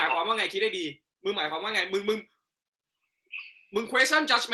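No technical faults can be heard anywhere here.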